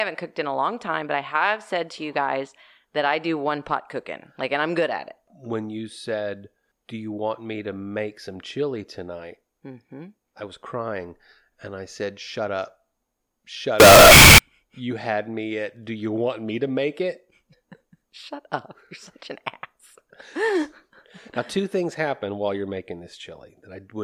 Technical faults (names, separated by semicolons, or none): float read as integer